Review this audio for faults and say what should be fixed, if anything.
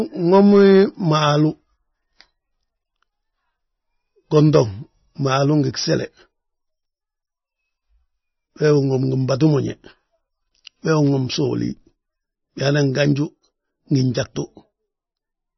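The encoder ran short of bits for the whole clip, most likely through MP3 compression at a very low setting; the heavy damage points to something around 20 kbps. With so few bits, the encoder removed everything above 5.9 kHz, which dulls s sounds and leaves the speech muffled. It also kept dropping weak frequency lines in and out between frames, giving a watery, swirling texture and smeared consonant attacks. To prevent it, encode at a much higher bitrate or keep the speech in a lossless format.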